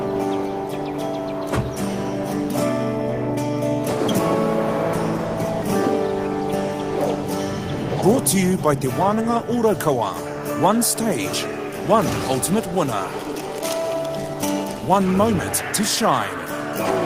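No technical faults are audible.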